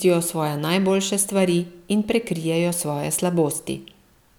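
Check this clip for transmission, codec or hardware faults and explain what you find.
No transmission, codec or hardware faults turn up in this clip.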